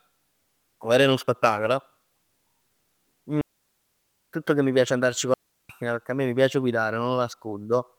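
Twice in this speech clip a digital wireless dropout occurs: the radio link loses more data than it can recover, so the receiver mutes behind a very fast fade rather than passing corrupted audio. The first hole runs from 3.41 to 4.33 s, about 0.92 s of near silence; the second, from 5.34 to 5.69 s, lasts about 0.36 s. Each is a clean gap, with no burst of noise on either side.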